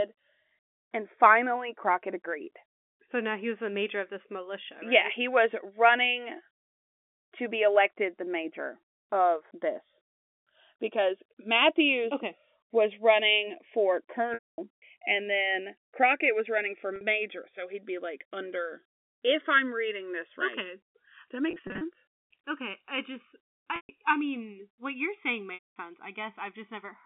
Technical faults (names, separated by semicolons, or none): channels drifting apart; packet loss with pitch repetition